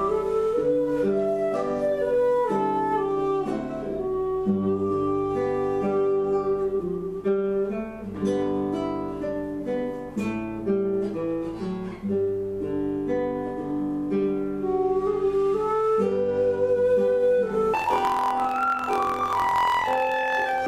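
From 17.74 s to the end at 20.68 s, the audio jumps an octave high with a rapid flutter at about 43 Hz. This is planar audio read as interleaved: each 23.22 ms block, consistent with 1024-sample blocks, plays twice at double speed, left channel then right.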